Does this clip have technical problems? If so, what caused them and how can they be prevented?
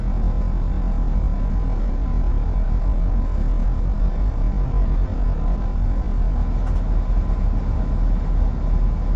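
Yes. Throughout, MP2 compression is plainly audible: gurgling, granular distortion that fits a rate around 48 kbps, unlike simple low-pass dullness. Encode at a higher bitrate or with a modern codec.

From 0.0 to 6.4 s, a time-stretched section plays at about half speed. It drags while the pitch stays put, which rules out slowed playback, where pitch would drop. This is likely from stretching software repeating short pieces. Avoid stretching the audio, or use a higher-quality stretch algorithm.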